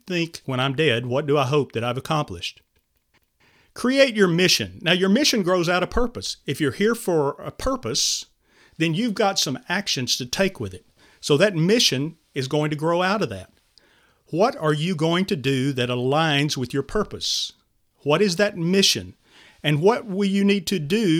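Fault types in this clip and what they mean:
No audible faults turn up anywhere in the recording.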